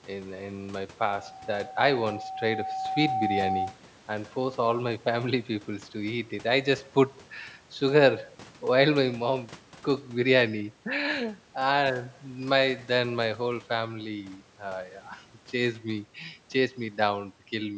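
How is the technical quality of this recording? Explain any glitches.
The recording has one clear glitch, a loudspeaker feedback squeal, heard through audio that has passed through call microphone processing and carries nothing above 8 kHz.

From 1.20 s to 3.80 s a single tone at 762 Hz swells up over roughly two seconds until it sits at about the same level as the speech. The microphone is picking up the loudspeaker it feeds, and at 762 Hz the loop gain exceeds one, so that frequency keeps reinforcing itself. On a spectrogram it appears as one bright horizontal line at 762 Hz that brightens as it rises. On the waveform the envelope swells steadily until the tone stops at 3.80 s.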